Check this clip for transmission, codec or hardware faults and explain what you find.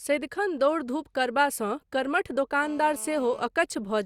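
One hardware fault is present: GSM phone buzz. From 2.63 to 3.47 s, just after "दौड़ धूप करबासँ कर्मठ", a hard, raspy buzz at 217 Hz, rich in harmonics and about 21 dB below the speech, sits steadily under the audio. A nearby 2G phone on a call transmitted in bursts 217 times a second, and the audio circuitry rectified those radio pulses into sound.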